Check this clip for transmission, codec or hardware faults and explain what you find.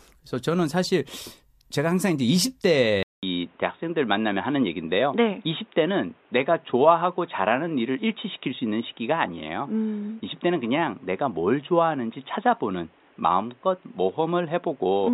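One fault is present. At 3.03 s the speech drops out for about 0.2 s, then returns dull and boxy, with nothing above 3.8 kHz and a new background noise sitting around 35 dB below the voice, while loudness stays roughly the same through to the end. This points to an input switched to a poorer device: recording likely moved to another microphone or a headset's call profile, whose narrower band, different tone and own noise floor replace the original input.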